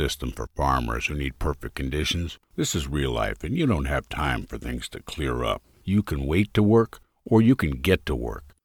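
Regular clicks recur every 1.54 s from 0.33 s to 8.05 s, likely clock drift buffer slips: a roughly 500 ppm clock mismatch dropping or repeating a few dozen samples each time.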